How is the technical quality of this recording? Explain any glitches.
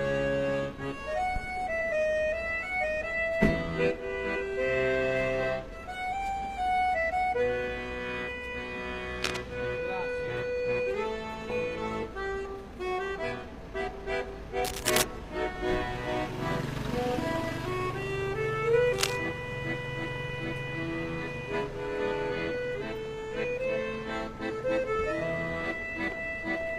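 The recording has two kinds of glitch, each heard three times.

Damaged data in a compressed stream occurs at 1.77 s, from 11.99 to 12.04 s, and from 20.25 to 20.30 s. Corrupted bytes make the decoder misread frames and lose sync until it finds the next header. Each one is a brief chirp or blip.

Cable scratch noise occurs from 9.23 to 9.44 s, 14.64 to 15.03 s, and 18.93 to 19.16 s. The likely cause is a worn cable or connector being moved, so its contact resistance flickers. Dense, uneven rustling bursts result. The first sits a little below the sound. The later two are about as loud as the sound.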